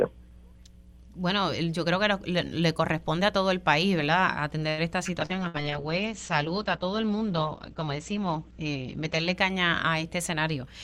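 At 4.69 s a packet arrived late and the jitter buffer ran dry, causing a short stall from a late packet. The receiver had nothing new to play, so it stretched the last sound for 84 ms until the packet turned up, then carried on from the same point. Nothing is lost, but the sound hangs too long with a faint buzz or dip, and playback now runs 84 ms further behind.

From 5.23 s to 9.41 s the call's bandwidth estimate collapsed and a call bitrate drop followed. The encoder went from 96 kbps to 10 kbps and stayed at that floor for about 4.1 s, and its audio bandwidth shrank from 20 kHz to 8 kHz. Everything above 8 kHz disappears and the coarser coding leaves the sound muffled and somewhat watery and rough until the rate climbs back.

Right at the start of that drop, between 5.26 s and 5.32 s, a short concealed packet loss occurs. About 60 ms of audio never reached the decoder in time. The receiver patched the hole with 31 ms of continued sound before rejoining the real stream, which also cut the playback delay by roughly 30 ms. 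The result is a brief smear.

From 5.36 s to 5.82 s the buffer triggers a jitter buffer slow-down. To rebuild its reserve the receiver repeated small pieces of the signal over and over, adding 39 ms in total and playing the audio at about 93% of normal speed. Pitch stays the same, but the sound is drawn out.

Inside that slowed stretch, from 5.48 s to 5.57 s, comes a burst of packet loss. Roughly 60 ms of consecutive audio was lost or arrived too late to use. The receiver filled 59 ms by extending the last sound and fading it, so a held buzz or a dying hiss stands in for the missing material, and the audio then picks up further along with that portion skipped.

Near the end, from 10.34 s to 10.83 s, the buffer held more audio than it wanted and a jitter buffer speed-up set in. The receiver trimmed short slices repeatedly, removing about 70 ms and running at roughly 113% speed. The pitch stays put, but the final half second sounds hurried and slightly clipped in its timing.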